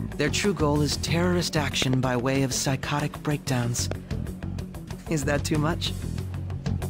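At 1.82 to 1.96 s there is a loud pop, heard as two sharp hits in quick succession. They stand about 20 dB above the surrounding sound, which carries on underneath. A sudden voltage step, from a plug, switch or static discharge, is the likely cause.

At 3.26 s a corrupt frame decoded produces a short glitch. Damaged bits in a compressed frame were played anyway. Wrong gains put energy at the wrong frequencies for one brief frame, peaking near -25 dBFS.

At 3.92 to 3.94 s comes a second loud pop. This one is a single thump, about 15 dB above the sound. It fits the same kind of electrical step.

At 4.87 s another corrupt frame decoded gives a brief glitch of misplaced energy. It also peaks near -25 dBFS. This time two neighbouring frames were hit.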